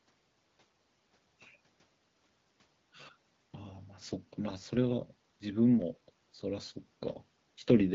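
No technical faults are audible.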